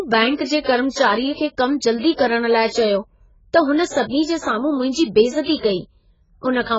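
Throughout, the speech sounds dull and smeared, with nothing above 7.6 kHz and fizzy, warbling sibilants, likely heavy AAC compression at a very low bitrate near 12 kbps.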